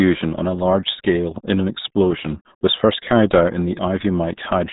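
Throughout, the speech passes through the RealAudio 14.4 codec at a rate that fits 8 kbit/s; nothing above 3.8 kHz survives, leaving it muffled and gargly.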